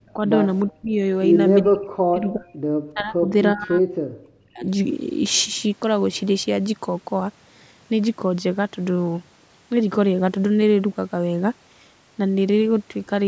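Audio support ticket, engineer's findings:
Speech suppressed in double talk: repeated deep dips and drop-outs at 0.0–0.19 s, 0.7–0.99 s, 1.62–2.46 s, 2.93–3.33 s (shallower, about 25 dB) and 3.53–4.66 s (longest). Dips mostly reach about 40 dB down. Likely component: echo canceller/suppressor treating near-end talk as loudspeaker echo while far end speaks, gating both. Band tops out at 8 kHz from call mic processing, not a fault.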